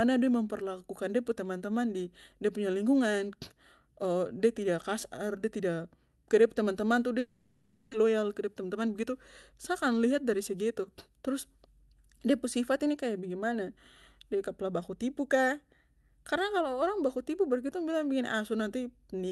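A speech recording with two linked faults in the middle. From 7.19 to 7.95 s the speech breaks into a buzzy, smeared continuation of the last sound that fades without dropping to silence. This is most likely a long network dropout, with the receiver filling the gap with synthetic sound. About 0.6 s of the original speech is simply gone when it resumes. On a spectrogram this shows as blurred, repeating harmonic bands thinning out across the gap, and the waveform decays into a low, even envelope. Right after, from 8.03 to 9.10 s, comes a jitter buffer speed-up. The late audio piled up in the buffer, so the receiver trimmed short pitch-period chunks to win back roughly a tenth of a second. The speech runs about 9% fast at unchanged pitch and sounds slightly rushed. The waveform shows compressed syllable spacing with no shift in harmonic spacing. On the spectrogram, the energy tops out near 12 kHz, consistent with the Opus call path.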